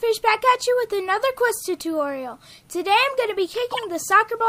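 Two runs of damaged compressed frames were decoded as if valid: flipped bits led the decoder to apply wrong gains and misread codes, scattering energy into the wrong frequencies. Each corrupt frame decoded becomes a brief chirp, squeak, blip or burst of noise lasting about as long as the damaged run, which sounds like a few frames. The first, from 1.52 to 1.64 s, peaks at about -20 dBFS. The second, from 3.72 to 3.79 s, is louder, reaching about -10 dBFS.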